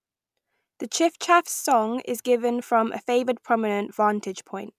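No technical faults are audible.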